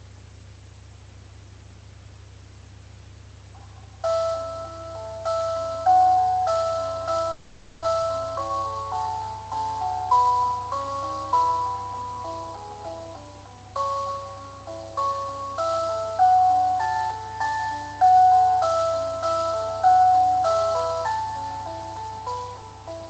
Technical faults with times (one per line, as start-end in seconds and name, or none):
7.31-7.86 long network dropout
7.95-9.10 jitter buffer speed-up